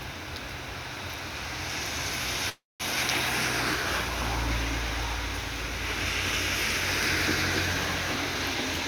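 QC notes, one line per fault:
2.49–2.82 s, call audio freeze: the last sound is held and fades, then 0.18 s of silence. Likely late packets. Playback resumes where it stopped.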